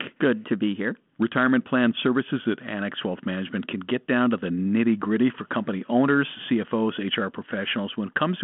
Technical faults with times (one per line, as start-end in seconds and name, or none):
none